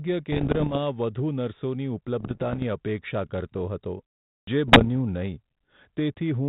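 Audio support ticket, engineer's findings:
Bit errors on an ADPCM link, 0.32–0.76 s, 2.20–2.65 s (ending just before "અપેક્ષા કરતો હતો"), 4.68–4.88 s. Pops and rough bursts with brief level jumps, worst in the first burst, lighter later. Flipped bits corrupt the decoder's step size and predictor, so each error rings for milliseconds.

Clipped start after a pause, 4.42–4.47 s, after "અપેક્ષા કરતો હતો". About 54 ms swallowed after a 0.42 s pause; the sound starts abruptly, missing its onset. Output device sleeping in silence, slow to wake and relock.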